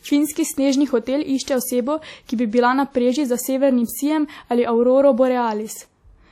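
Throughout, the speech rings and smears, with hiss breathing alongside it and nothing above 17.3 kHz, likely WMA compression at a bitrate fitting 48 kbps.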